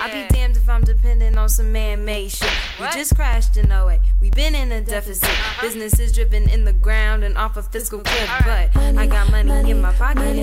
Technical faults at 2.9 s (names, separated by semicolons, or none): periodic USB or driver dropouts